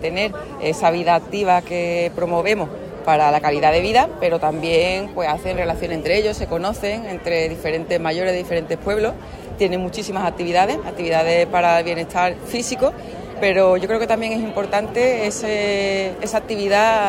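No technical faults can be heard anywhere in the audio. Nothing breaks, drops out or changes unexpectedly at any point.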